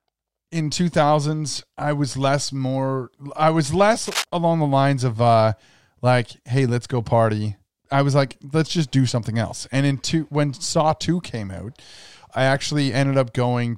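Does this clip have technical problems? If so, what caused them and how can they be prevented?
Yes. A worn cable or connector was likely flexed during recording, so its contact resistance jumped around from moment to moment and let dense, irregular bursts of noise into the signal. The result is cable scratch noise, a brief scratchy rustle from 4.07 to 4.24 s, between "more I was less" and "along the lines of", sitting only a little below the speech level. Replacing worn leads and securing cables so they cannot move during takes prevents it.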